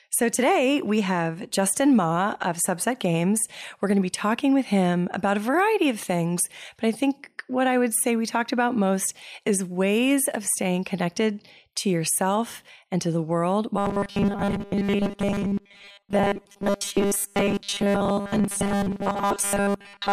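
From 13.78 s to the end at 20.13 s, the speech turns into robotic sound from repeated short buffers: a rigid, metallic buzz pitched at 200 Hz that loosely tracks the words. The likely cause is new audio arriving too seldom, so the playback repeats the last 5 ms chunk for roughly seventy percent of the time while real audio is dropped. A spectrogram shows flat, evenly spaced harmonic stripes at multiples of 200 Hz, and the waveform shows identical 5 ms cycles repeating.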